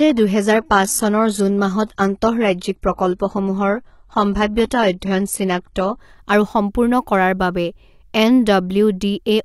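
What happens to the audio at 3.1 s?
At 3.1 s the speech sounds dull and smeared, with nothing above about 11.8 kHz and thin, synthetic-sounding treble. This is an adaptive stream starting at a low bitrate, which fits a 16 kbit/s HE-AAC stream. The player runs on it from 0.0 s to 6.0 s before stepping up abruptly.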